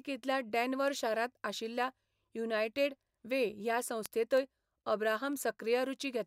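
Word clock ticks run from 0.24 s to 5.97 s: an unlocked digital input slips one sample roughly every 0.3 s, about twenty sharp, uneven ticks.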